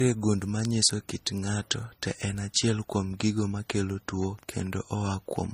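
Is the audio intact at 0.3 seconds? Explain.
No. At 0.3 seconds the speech carries the marks of transcoding between lossy codecs, and this runs through the whole clip. The likely cause is a low-rate MP3 encode, around 33 kbit/s, later re-encoded as Vorbis at 42 kbit/s. The second codec spends its bits on the first codec's errors and adds its own. The artefacts from both are heard together. Nothing is heard above 15.3 kHz.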